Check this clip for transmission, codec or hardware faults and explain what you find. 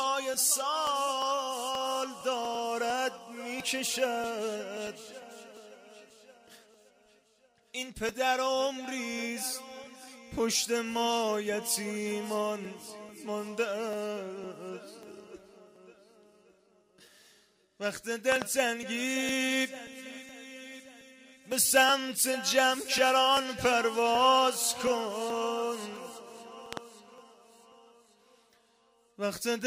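Two loud pops stand out, each a quick double pop, from 18.32 to 18.44 s and from 26.73 to 26.79 s. Both peak at roughly 20 dB above the surrounding audio. A loud pop is likely a sudden voltage step, from a plug, switch, static or driver glitch, added to the signal and shaped by the circuitry after it. Unlike a dropout, the sound carries on underneath each pop.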